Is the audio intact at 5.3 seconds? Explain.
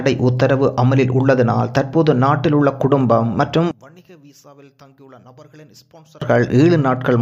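No. From 3.71 to 6.22 s the sound collapses by about 28 dB, most likely because one channel is inverted, so the shared, centred content cancels when the two channels are combined in mono. At 5.3 s what survives is only the difference between the channels, a faint residue with the centre missing. A plain dropout or gain fault would instead leave silence or a uniformly quieter copy.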